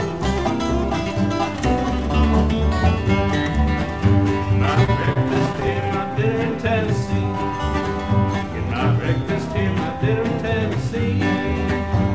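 Repeated stalls (stutter) from 4.66 to 5.89 s: packets arrived late, the jitter buffer kept running dry, and short fills of up to 31 ms stretched the audio into a stutter. The audio passed through a G.722 call path, with nothing above 8 kHz.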